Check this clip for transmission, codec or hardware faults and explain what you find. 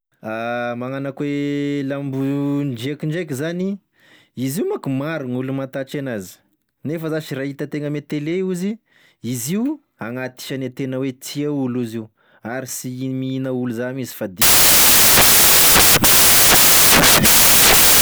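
One fault is present: from 14.42 s to the end of the clip, samples are built from the wrong bytes. The reader misassembles each sample's bytes, so the rapidly changing low bits land in the high-order position. The speech turns into loud, harsh broadband noise, close to white on louder passages.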